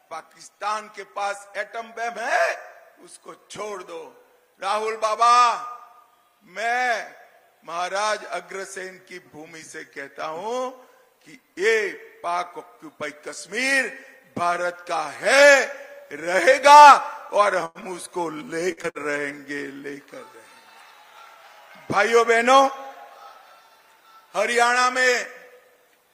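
A short stall from a late packet comes first, from 17.65 to 17.78 s. A packet missed its playout time and the jitter buffer ran dry, so the receiver held the last sound for 97 ms until the packet turned up, then carried on from exactly where it stopped. Nothing is lost, but that moment is drawn out with a faint buzzy sustain, and everything after it plays 97 ms later than before.

A burst of packet loss follows at 18.72 to 18.80 s. Several consecutive packets never arrived in time, so the receiver extended the preceding sound for 48 ms, fading it as it went, and then resumed further along. About 60 ms of audio is gone, heard as a brief held tone or dying hiss followed by an abrupt continuation.

Immediately after, at 18.83 to 18.87 s, comes a skip ahead. Later audio was already queued, so a stretch of roughly 70 ms was discarded and playback jumped forward with only an 8 ms bridge. The join is nearly seamless but clipped, and the delay drops by roughly 50 ms.

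A second short stall from a late packet runs from 18.90 to 19.13 s. The buffer emptied again and the last sound was stretched for 52 ms before the packet arrived, with no audio lost. It is another brief smeared hold, and the delay grows by 52 ms.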